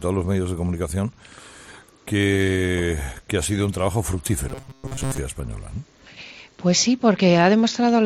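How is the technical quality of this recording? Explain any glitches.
The recording has one glitch. Robotic sound from repeated short buffers runs from 4.49 to 5.18 s. The likely cause is audio arriving too seldom, so the playback fills each gap by looping a very short fragment, roughly 7.5 ms long, and skips the real material underneath. Repeats make up most of that stretch. Looping at that rate stamps a fixed pitch of 134 Hz onto the sound, which turns rigid and metallic, a steady buzz that only loosely tracks the underlying audio.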